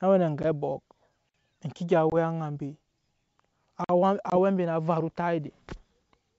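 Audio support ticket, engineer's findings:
Hard-edged dropouts at 0.43–0.45 s (just after "we na ange"), 2.10–2.14 s and 4.30–4.35 s, about 10, 20 and 20 ms of lost sound, each followed by slightly distorted speech. Packet loss on the ADPCM call, roughly one to two packets each time. The decoder's predictor and step size drift from the sender's and take tens of milliseconds to settle.

Clean 50 ms silences at 1.29–1.34 s (after "we na ange abɔk") and 3.84–3.89 s, 2.5 s apart. No sound is missing; playback simply pauses at each join. This is a gap between chunks, pointing to padding or a late start on each 2.5 s chunk.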